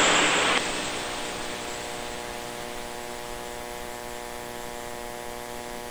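No technical faults can be heard anywhere in the signal.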